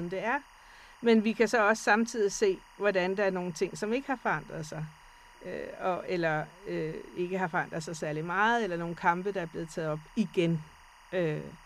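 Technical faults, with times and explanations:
Throughout, timecode bleed: a steady chirping warble sits behind the speech, roughly 25 dB below it, flipping between tones near 1 kHz and 2 kHz. Linear timecode at 23.976 frames per second is leaking in from a neighbouring track or cable, its square-wave code switching between those two pitches.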